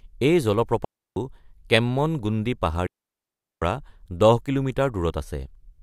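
At 0.85 s the speech drops into a clean hole until 1.16 s, then again from 2.87 to 3.62 s, about 0.32 s and 0.75 s long. That's a digital wireless dropout: the receiver lost too much data and muted fast, leaving near silence without any noise burst.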